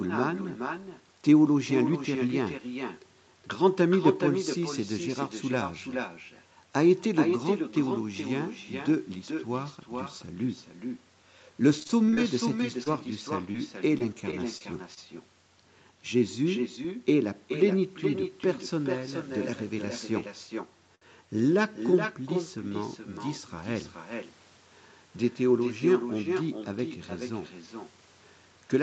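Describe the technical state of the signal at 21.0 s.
A short stall from a late packet runs from 20.95 to 21.03 s. The jitter buffer ran dry, so the last sound is held for 65 ms; nothing is lost.

Echo with no canceller is also present. The speech returns roughly 0.4 s later as a thinner copy, about 7 dB quieter.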